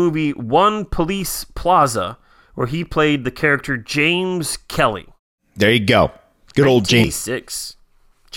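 At 7.04 s the compressed speech stream carries damaged data: bytes in the stream were corrupted, so the decoder misreads the frames there, loses sync and hunts for the next valid header. The result is a single short glitch cutting through the speech.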